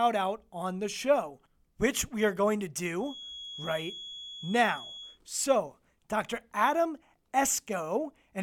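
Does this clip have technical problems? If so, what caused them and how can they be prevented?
Yes. A feedback whistle runs from 2.96 to 5.20 s, just after "we are going to": a steady 3.4 kHz tone sits well below the speech, likely from a loudspeaker-to-microphone loop hovering at the edge of feedback. To prevent it, lower monitor gain, keep the microphone away from speakers, or notch out 3.4 kHz.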